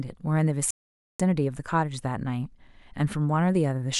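A speech recording with a playback stall: the sound halts abruptly mid-flow at 0.71 s and stays silent until 1.20 s, a gap of about 490 ms, before the speech resumes. The likely cause is the player running short of data or having its output thread blocked, so nothing reached the output until it recovered. What sets this apart from a natural pause between phrases is the abrupt cut in mid-flow and the flat silence that follows.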